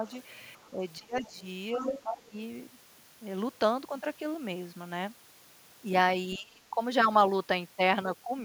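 From 0.0 to 0.06 s the speech dips by a few decibels, a small case of speech suppressed in double talk, likely an echo canceller ducking the talker while the far end is also active. On a waveform the envelope briefly narrows. At 0.07 to 0.12 s and 0.59 to 0.7 s, faint traces of the other side's voice leak through, about 30 to 35 dB below the speech. This is likely echo the canceller failed to remove, and it shows as weak harmonic streaks on a spectrogram.

From 0.71 to 1.45 s the speech is pulled down by as much as about 20 dB. Within that span, at 1.15 to 1.3 s, the leaking voice rises to about 20 dB below the speech. From 1.76 to 2.38 s the speech is again suppressed by up to about 20 dB. At 1.79 to 2.01 s the leak is strongest, only about 5 dB under the talker, and two overlapping harmonic patterns are visible. At 6.38 to 6.79 s the speech drops by up to about 25 dB, which appears as a hollowed-out notch in the waveform envelope.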